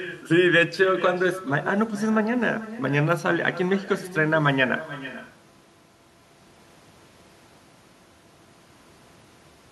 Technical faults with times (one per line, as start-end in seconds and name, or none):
0.00-9.72 echo with no canceller